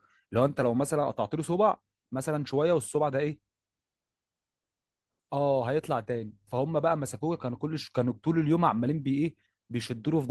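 A speech recording with no technical faults to report.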